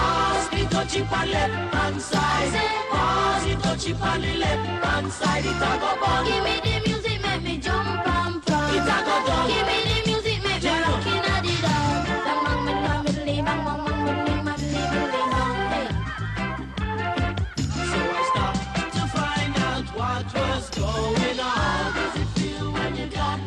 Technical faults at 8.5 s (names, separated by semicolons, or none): none